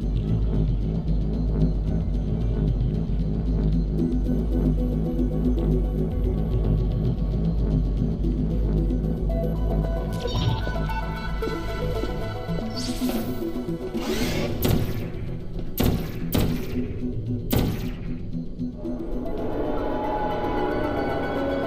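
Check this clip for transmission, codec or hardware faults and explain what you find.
No faults can be heard anywhere in this recording.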